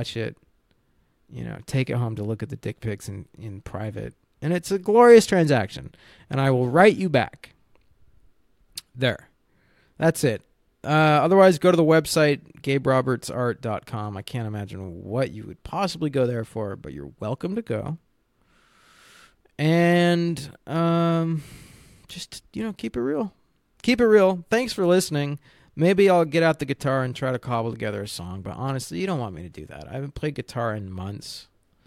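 Speech, with no technical faults.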